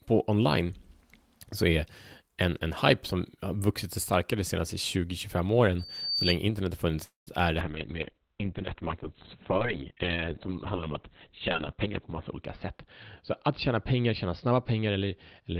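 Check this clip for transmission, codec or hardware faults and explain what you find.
Four kinds of fault can be heard in this speech.

Loudspeaker feedback squeal, 5.79 to 6.38 s, just before "internet har". A microphone is picking up the loudspeaker it feeds, and at 4.6 kHz the loop gain rises above one, so that frequency keeps reinforcing itself. A thin, piercing tone swells over roughly 0.4 s until it is about as loud as the speech, then stops.

Call audio freeze, 7.03 to 7.29 s, between "internet har" and "är det". The sound stalls. A lingering continuation of the last sound fades into about 150 ms of silence. The likely cause is late packets draining the jitter buffer, so the receiver filled 233 ms itself. Nothing is lost: the speech resumes where it stopped, but 233 ms later than before.

Call bitrate drop, from 7.61 s to the end, starting right after "är det". The encoder's budget falls from 32 kbps to 6 kbps and stays at the lowest rate for 4.68 s. 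The audio bandwidth shrinks from 20 kHz to 4 kHz, so the speech turns muffled and dull, and the coarser coding makes it sound rough and watery.

Jitter buffer speed-up, 11.84 to 11.87 s and 13.23 to 15.56 s. The receiver is holding more buffered audio than it needs, so it trims pitch-period-sized slices to reduce the delay. The first event is a brief jolt at 273% speed that removes roughly 50 ms. The second runs at 106% and removes about 150 ms. Pitch stays unchanged, but the speech sounds slightly hurried.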